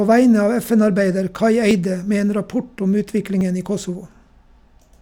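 At 1.71 s and 3.41 s, abrupt jumps suggest a likely dropped buffer (overrun), each losing about 10 ms; waveforms show spliced discontinuities, spectrograms thin vertical broadband lines.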